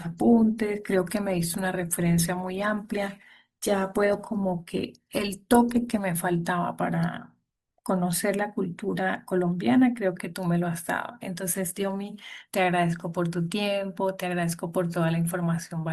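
Speech, with an adaptive stream starting at a low bitrate. From 0.0 to 6.0 s the top end is dull and thin, and codec artefacts are more prominent, which fits a low-rate Opus stream at around 24 kbit/s. At 6.0 s the quality lifts abruptly with no gap, consistent with the player switching to a higher rung near 64 kbit/s once it had measured the connection's throughput.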